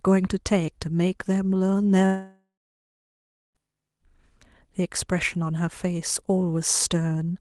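A long network dropout runs from 2.05 s to 3.58 s in this speech, likely caused by packets failing to arrive for about 1.5 s. For the first few tenths of a second the receiver stretches the last sound it had into a fading buzz, then about 1.07 s of near silence follows before the speech resumes. The 1.5 s of lost audio is simply skipped. Around it, the Opus call path's limit of about 12 kHz can be heard in the speech.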